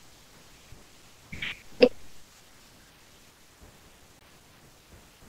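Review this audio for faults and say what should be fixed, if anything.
Bluetooth dropout, 4.19 to 4.22 s: the speech cuts to silence and resumes further along, likely because one wireless packet arrived too late and was discarded. To prevent it, shorten the distance and remove obstructions between source and headphones, reduce 2.4 GHz interference, or monitor over a wired connection during capture and review.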